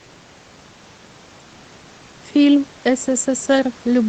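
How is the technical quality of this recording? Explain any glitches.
No glitches or faults can be heard in this recording.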